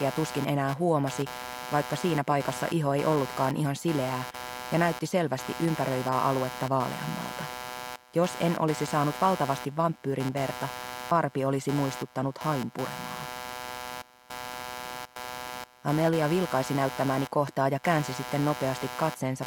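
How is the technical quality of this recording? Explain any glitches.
The recording is compromised by one fault present from start to finish. Computer activity noise: processor and peripheral load changes disturb the shared audio ground, adding a buzzing, chirping pulse around 150 Hz, only about 10 dB below the sound.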